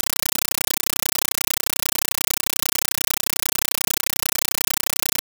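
Compressed stream played as audio, throughout the clip: an AC-3 (Dolby Digital) bitstream has reached the output without being decoded, so its coded data is being reproduced as if it were PCM samples. Each frame becomes an 8.0 ms burst of harsh noise followed by silent padding, repeating 31.25 times a second, a density that fits a 384 kbps stream. The speech is replaced entirely by very loud, rapidly chattering static.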